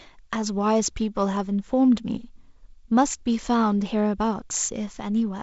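Nothing stood out on listening to this speech, which comes through the G.722 wideband telephone path with its top end ending a little below 8 kHz.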